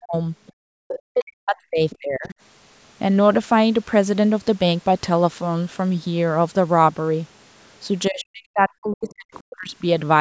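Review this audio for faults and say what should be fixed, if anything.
Speech suppressed in double talk at 0.00–0.15 s, 0.98–2.34 s and 8.09–9.72 s: the talker's voice dips by as much as around 40 dB, likely because the echo canceller could not tell the talker from the loudspeaker echo while both sides spoke and attenuated everything. Prevent it with a double-talk detector that freezes the canceller's adaptation during overlapping speech instead of muting the microphone.

Other side's voice leaking through at 0.47–0.98 s, 1.56–2.34 s and 9.07–9.35 s: a second voice is audible beneath the talker, roughly 10 dB down at first and then around 25 and 30 dB down. The likely mechanism is residual loudspeaker echo that the canceller failed to subtract from the microphone signal. Prevent it by lowering speaker volume or improving acoustic isolation, and giving the canceller a longer filter and better echo-path tracking.

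Background gated by the echo canceller at 0.53–0.70 s: the room sound drops by about 40 dB for a brief moment while the loudspeaker plays, then returns as the canceller's suppression releases. Prevent it with gentler residual-echo suppression plus comfort-noise fill, so the background never cuts out.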